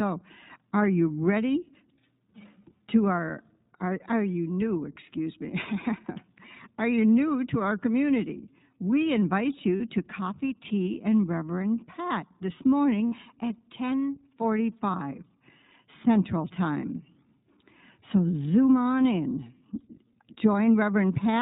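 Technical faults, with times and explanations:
Throughout: iLBC codec. Narrowband coding removes everything above 4 kHz, and the plainly audible roughness sounds synthetic, which fits about 15 kbps with 20 ms frames.
9.76 s, 13.07 s and 14.92 s: lost iLBC frames. Gaps of 40, 60 and 20 ms become held, buzzy vowels from the repeated pitch cycle, and the first comes just before "to coffee tea and".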